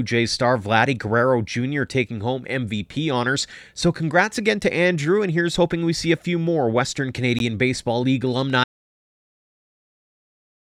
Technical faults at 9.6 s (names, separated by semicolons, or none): audio dropout to silence